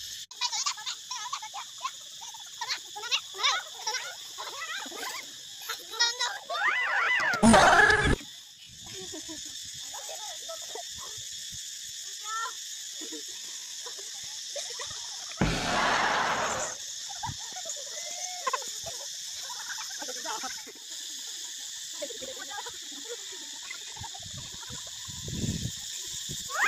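From 5.34 s to 14.12 s there is a time-stretched section, likely from software lengthening this passage by repeating short slices while holding pitch. The sound slows abruptly to about 0.71 times its pace with unchanged pitch, dragging until normal pace resumes.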